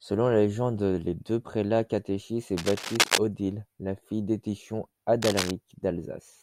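A worn cable or connector being moved likely caused cable scratch noise, its contact resistance jumping unevenly. From 2.57 to 3.18 s, after "deux prélats catéchisent et", dense scratchy bursts sit about as loud as the speech, returning about 5 dB quieter from 5.22 to 5.51 s.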